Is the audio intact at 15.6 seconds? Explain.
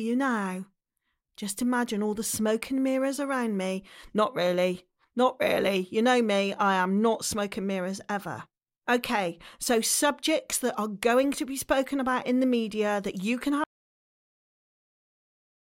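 No. At 15.6 seconds the clip is inside an audio dropout to silence that begins at 13.64 s, just after "media that you can", and runs to the end. The input was likely lost while writing continued, so the speech cuts off mid-flow into silence with no room tone.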